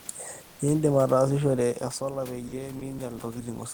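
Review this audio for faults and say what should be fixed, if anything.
The automatic gain control kept rising from 1.99 s to the end, compensating for input that fell by about 11 dB, so the voice and background swell together. Prevent it by slowing or capping the gain rise.

Short stretches of speech were likely dropped by the voice detector, with Opus DTX treating the sound as background. The stretches, at 2.47 to 2.52 s (50 ms), 2.79 to 2.81 s (20 ms) and 2.98 s (10 ms), gave way to comfort noise. Prevent it by making the detector more sensitive or holding transmission longer after speech.

The room noise sits about 29 dB below the speech, and the level shift around 1.5 s sounds like the talker moving.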